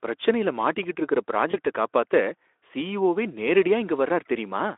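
At 1.52 to 1.56 s, just after "பிரச்சனையில மாட்டிக்கிட்டு இருக்கற", there is VoIP packet loss concealed by the speech codec. The gap sounds like a single lost 20 ms frame. The decoder filled it by repeating its last pitch and filter at falling gain. That yields a brief buzzy or noisy smear. The damage lasts into the next frames after packets return, since each builds on the previous one. The band-limited Speex sound around it points to a line of roughly 300 Hz to 3.5 kHz.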